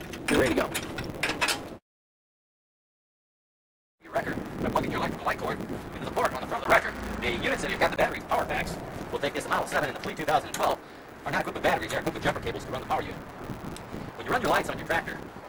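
A block size mismatch (truncated) runs through the whole audio. One stage writes longer blocks than the next stage reads, so the tail of every block is discarded. The spacing of the resulting buzz fits 512-sample writes. That buzz sits at 150 Hz, the rate at which the cuts repeat, and the audio plays 1.6 times too fast because the dropped portions shorten it, while the overall timbre is kept. From 6.64 s to 7.97 s the sound changes character, most likely because the input switched to a poorer device partway through the recording. There is a short gap of about 20 ms at the switch. During that stretch the band narrows and the tone takes on the other device's colour. A new background noise appears roughly 30 dB below the signal, and the level shifts by around 5 dB.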